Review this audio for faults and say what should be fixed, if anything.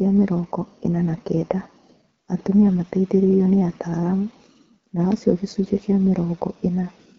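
The whole speech clip carries the AMR wideband (HD Voice) codec at a low rate, and the damage is plainly audible from start to finish. The codec models speech as pulses through a vocal tract filter up to 6.4 kHz, then fills the 6.4 to 7 kHz band with shaped noise. With so few bits for the pulses, the result sounds rough and raspy, which fits the 8.85 kbit/s mode. To prevent it, encode at 12.65 kbit/s or higher.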